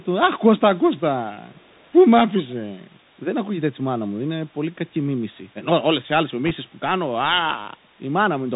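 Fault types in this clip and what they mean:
Bluetooth CVSD headset codec: narrowband one-bit delta coding at 64 kbps; the spectrogram shows nothing above 4 kHz, with granular hiss and scratchy, overloaded s sounds throughout.
Echo leak: a faint copy about 40 dB down, delayed 397 ms, briefly around 1.5 to 1.9 s, likely from a loudspeaker echo canceller letting residue through; barely visible on a spectrogram.
Bit errors on a Bluetooth voice link: flipped bits on the headset link give a short rushing crackle near 6.46 to 6.51 s, a smear of broadband noise at roughly 1.5% bit error rate without sharp waveform spikes.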